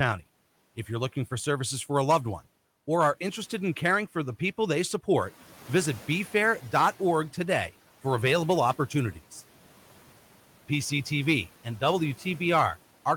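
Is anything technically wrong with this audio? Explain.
Yes. The noise suppressor is catching up from 5.17 to 7.29 s. Room noise jumps by about 10 dB around 5 s. The suppressor's noise estimate lags behind, so the noise comes through less reduced. Over about 2.1 s it sinks by about 8 dB as the estimate adapts.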